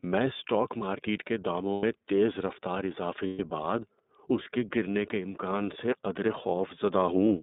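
Throughout the speech, the iLBC codec limits the band to roughly 200 Hz to 3.7 kHz, removing all high-frequency detail. Each frame's excitation is coded independently, and the voice takes on a plainly audible rough, synthetic edge, consistent with iLBC's 13.33 kbps mode and its 30 ms frames.

Lost iLBC frames occur at 1.73–1.84 s (about 90 ms) and at 3.27–3.40 s (about 120 ms). These durations suggest three and four dropped 30 ms packets. In each gap the decoder repeats the last pitch cycle mixed with noise, producing a held, buzzy vowel, and the voice is right again almost immediately afterwards.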